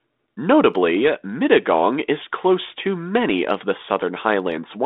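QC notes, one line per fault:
Speech comes over a G.726 ADPCM path at 32 kbit/s, the rate that fits a DECT cordless link, with the line band running from 200 Hz to 3.7 kHz as expected for that telephone coding.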